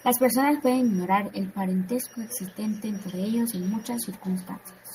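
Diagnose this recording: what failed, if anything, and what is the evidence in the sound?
What failed is call processing, specifically a feedback echo between two devices. From 2.19 s to the end, the speech comes back as a faint, thin, slightly ringing copy roughly every 400 ms, peaking at about 27 dB below the speech. A second device in the room is playing this call out loud, and this microphone picks it up again. The local echo canceller only removes its own device's playback, so it lets that copy through.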